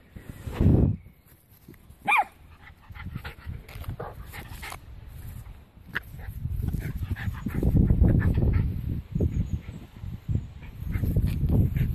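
Nothing goes wrong anywhere in this recording, so there's no fault to point out at any moment.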